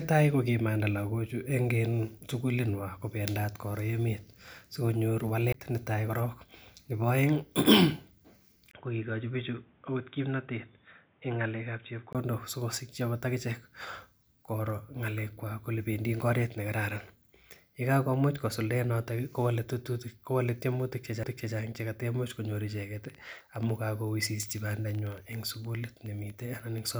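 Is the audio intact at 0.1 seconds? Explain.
Yes, at 0.1 seconds the speech plays through intact, with no fault at that moment.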